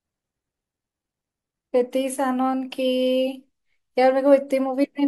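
No technical faults can be heard anywhere in the recording; the signal holds steady at every point, with nothing that marks a problem in capture, processing or playback.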